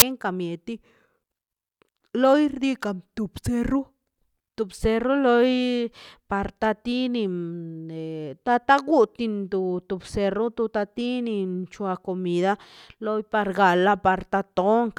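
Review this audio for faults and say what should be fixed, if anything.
Right at 0.0 s there's a short, very loud burst of white noise: file tags played as audio, where an embedded cover picture's compressed bytes were decoded as samples. Fix it by making the decoder skip metadata blocks, so embedded artwork never reaches the sample stream.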